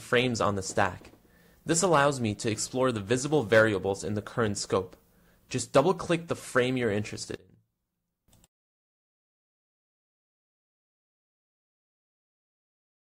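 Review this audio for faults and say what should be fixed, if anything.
One channel inverted, from 7.36 to 8.28 s: the sound drops by about 20 dB, with the centred material nearly gone. The likely cause is reversed polarity on one stereo channel, so the content shared by left and right cancels when the pair is summed, leaving only the faint difference between them. To fix it, flip the polarity of the affected channel back over that stretch. To prevent it, check polarity with a correlation meter or a mono fold-down before export.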